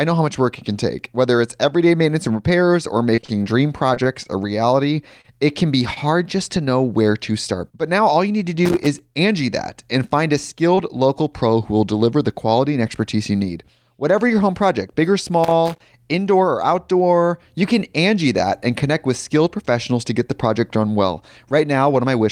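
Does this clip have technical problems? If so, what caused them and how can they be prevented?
Yes. Between 3.15 and 4.27 s the speech turns choppy and robotic, with what sounds like seven separate dropouts in quick succession. This is repeated packet loss. Each time audio failed to arrive, the receiver covered the hole by extending the preceding sound, and another hole followed before it recovered. About 137 ms was synthesised, 80 ms of real speech is gone, the longest gap is 31 ms, and roughly 12% of the stretch is concealment. Prevention: use a stable wired network with QoS prioritisation and forward error correction so isolated losses can be rebuilt.

At 5.21 to 5.26 s, and again at 10.75 to 10.79 s between "that and find a" and "local pro who will", there is a brief smear where a fragment of speech briefly wobbles. Both are short concealed packet loss. In each case about 20 ms never reached the decoder, and the receiver bridged it with 27 ms and 16 ms of continued sound before blending back into the real signal. 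Prevention: reduce network loss at the source and enable redundancy or FEC in the codec settings.

Between "reality it can be" and "just to know where", at 5.94 to 5.98 s, a sound is held slightly too long with a slight buzz or dip. This is a short stall from a late packet. The jitter buffer ran dry, so the receiver stretched the last sound for about 25 ms until the packet turned up. Nothing is lost, and the delay jumped by 25 ms. Prevention: allow a slightly deeper adaptive jitter buffer and reduce competing traffic that causes delay spikes.

Irregular scratching bursts appear at 8.65 to 8.99 s and at 15.44 to 15.81 s, the second ending just before "indoor or outdoor you". This is loose connector crackle. A worn or dirty contact in the cable run was intermittently making and breaking, chopping the signal as it moved. Prevention: clean or replace the suspect connector and cable, and secure the lead so it cannot shift during recording.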